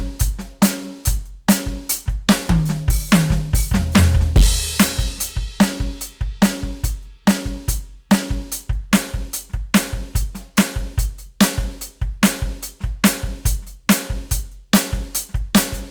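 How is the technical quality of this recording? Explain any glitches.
The technical quality is compromised by one fault running through the whole music recording. Throughout, hard clipping puts a harsh fuzz on the loud peaks. The signal is driven about 13 dB past what the chain can pass, so around two percent of samples are cut flat, adding high harmonics.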